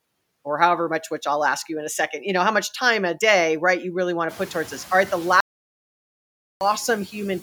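Noise suppressor artifacts run through the whole speech clip. The suppressor pulls down whatever bands it judges to be steady noise, by about 10 dB, frame by frame. The background sinks in the pauses and swells back under each phrase. From around 4.5 s, the room noise climbs by about 20 dB and sits roughly 19 dB below the speech, giving the suppressor more noise to work against.

An audio dropout to silence begins at 5.40 s, just after "right the", and lasts until 6.61 s. For about 1.21 s the signal falls to silence with no room tone, then resumes mid-flow. The likely cause is a lost input, with the recorder writing silence meanwhile.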